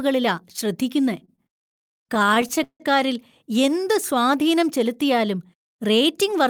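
From 1.25 to 2.82 s the speech drags and stutters through repeated stalls (stutter): sixteen short holds, the longest 163 ms, as late packets left the jitter buffer empty. From 5.44 to 6.48 s the speech runs about 4% fast at unchanged pitch, a jitter buffer speed-up trimming roughly 50 ms of pitch periods to cut excess delay.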